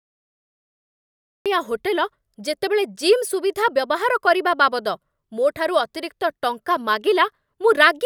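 A cut-off start runs from 0.0 to 1.46 s: the capture began late, so the file holds only digital silence until 1.46 s, where the speech cuts in abruptly partway through a sound, with no natural onset or fade-in leading into it.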